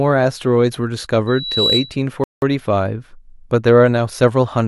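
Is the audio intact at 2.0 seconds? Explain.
Yes. A loudspeaker feedback squeal runs from 1.27 to 1.97 s, ending just before 2.0. A microphone-speaker loop rings at 3.9 kHz, swelling over roughly 0.4 s to about signal level, a bright horizontal spectrogram line.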